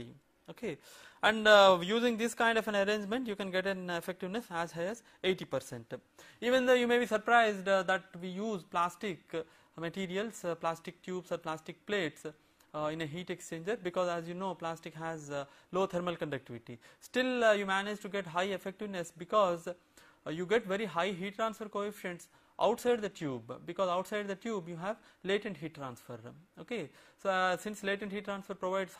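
No technical faults can be heard anywhere in the audio, so there is nothing to describe in time order.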